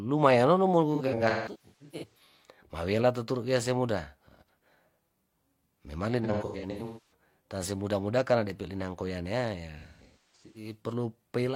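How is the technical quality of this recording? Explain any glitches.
The quality is compromised by three bursts of AAC frame loss with concealment, from 0.95 to 2.20 s, 6.24 to 7.12 s and 9.78 to 10.73 s. Compressed frames went missing in clusters, and the decoder patched each gap by reusing the last good spectrum. In the first burst, about 0.73 s of audio is lost across 1.2 s. The later two each lose about 0.6 s, and their longest runs reach roughly 300 ms. The speech there turns smeared, noisy and phasey, with stretches dipping toward silence before recovering.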